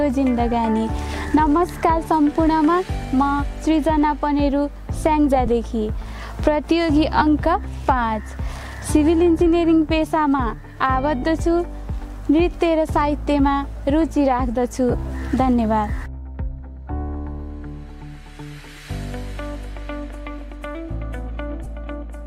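Lost LE Audio frames occur at 5.46 s, 7.18 to 7.22 s, 11.22 s, 14.91 to 14.94 s and 21.64 s. The gaps last 15, 30, 7.5, 30 and 15 ms, which fits runs of one to four 7.5 ms frames dropped on the Bluetooth link. The LC3 decoder covers each gap by replaying the last spectrum with randomised phase signs. Any tonal content briefly turns into a noisy smear.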